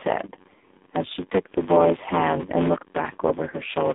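From the start there's a steady buzz at about 94 Hz, a block size mismatch (padded). Each block gets a zero-filled gap, so the speech runs at 0.861 speed with pitch unchanged, which fits a 512-sample read. The whole clip also carries AMR narrowband mobile codec damage: the band is squeezed to 200 Hz–3.7 kHz, and the voice is heavily buzzy and synthetic, pointing to a low mode of around 6 kbps. Near the end, from 3.50 to 3.56 s, there's a brief dip and warble from lost AMR speech frames. One 20 ms frame went missing, the decoder bridged it with the previous settings at falling gain, and the voice returns a little rough.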